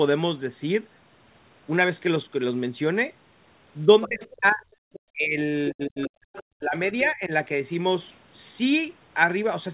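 Speech suppressed in double talk first appears from 3.85 to 4.63 s. The talker's level dips by about 30 dB in pieces totalling roughly half a second, likely because the echo canceller could not separate the near talker from loudspeaker echo and attenuated both. Inside that stretch, from 4.02 to 4.56 s, the other side's voice leaks through at about 15 dB below the speech, a second voice the canceller likely failed to remove. Another brief leak follows at 4.93 to 5.00 s, about 20 dB down. Suppression returns at 5.13 to 5.37 s, again about 30 dB deep. The longest episode runs from 5.70 to 7.31 s: the speech drops by up to about 40 dB, in fragments adding up to around a second. Within it, leaked far-end audio surfaces at 6.01 to 6.43 s (about 20 dB down) and 6.90 to 7.12 s (about 25 dB down).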